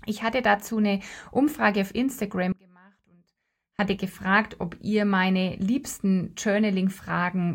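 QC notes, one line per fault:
2.52–3.79 s: audio dropout to a faint residue. The speech cuts out abruptly for about 1.27 s, and the gap is not silent: a faint sound remains, roughly 30 dB below normal level. The sound then returns just as abruptly on "gefragt ob ihr meine". The hard edges at both ends rule out a natural pause or fade. The likely cause is a brief loss of the main signal feed while the downstream path stayed live and carried only a faint residue.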